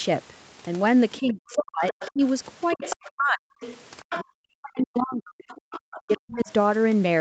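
From 1.19 to 2.21 s, 2.75 to 3.6 s and 4.19 to 6.49 s the talker is pushed down in pieces, falling by about 40 dB at worst. This is speech suppressed in double talk, likely an echo canceller that could not tell the talker from loudspeaker echo and ducked both. It differs from an ordinary dropout because the cuts follow the other voice's activity.

That other side's voice leaking through appears at 1.5 to 1.55 s, 1.88 to 2.11 s, 2.7 to 3.1 s, 3.61 to 4.24 s and 5.49 to 6.45 s. It is a separate second voice roughly 15 to 30 dB below the talker, likely residual loudspeaker echo. It is not a smeared repeat of the talker's own sound.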